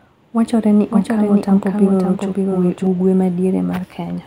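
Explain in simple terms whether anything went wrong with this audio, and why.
From about 0.91 s to 2.87 s, the speech is heard twice: a second, quieter copy runs about half a second behind the original. This is a doubled audio track, most likely from the same sound being picked up again through a slower route. Unlike a room echo, the copy keeps its full clarity, doesn't fade away, and has no roomy sound to it. It switches on and off abruptly at those two times.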